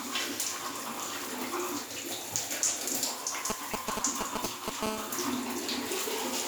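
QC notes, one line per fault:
3.50 to 4.84 s, GSM signalling bursts: a nearby 2G phone exchanges short control transmissions with its network, and the audio circuitry rectifies each group of radio pulses into sound. The result is a galloping dit-dit-dit of brief 217 Hz buzzes, standing somewhat above the wanted sound. A spectrogram shows intermittent vertical blocks of evenly spaced harmonic lines. The waveform shows clustered rectangular pulse trains separated by gaps.
4.84 to 6.42 s, GSM phone buzz: a nearby phone is in a call and transmits continuously at its 217-per-second burst rate. Rectification turns that pulse train into a hard, raspy buzz at 217 Hz, rich in harmonics and unrelated to the audio, sitting about 8 dB below it. A spectrogram shows an unbroken comb of horizontal lines at 217 Hz multiples extending well into the kHz range. The waveform shows a steady square-edged ripple riding on the signal.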